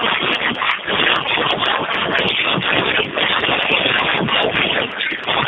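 A speech clip with tandem speech coding throughout: it sounds rough, muffled and warbly, as if recoded by three low-rate speech codecs in a row. On a spectrogram nothing appears above 3.7 kHz, and harmonics look smeared and patchy.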